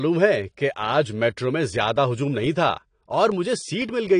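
AAC compression runs throughout: the speech has nothing above 9.6 kHz and sounds dull and smeared, likely from low-bitrate AAC-LC coding, which fits about 32 kbps.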